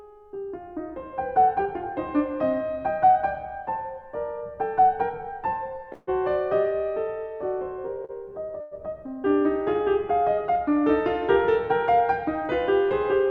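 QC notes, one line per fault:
5.93–6.09 s and 8.61–8.74 s, call audio freeze: the music is frozen into a fading buzz or hiss for about 148 ms and then 107 ms, with no silence. Playback then resumes exactly where it stopped, so nothing is lost but everything after arrives later. The likely cause is packets held up in transit, emptying the jitter buffer.
8.05–8.11 s, short stall from a late packet: the current sound is stretched by 40 ms, heard as a brief held note with a slight buzz or dip. The receiver filled the gap while one packet arrived late, then continued from the same point with nothing missing.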